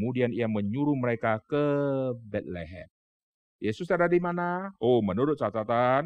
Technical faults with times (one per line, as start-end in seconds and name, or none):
none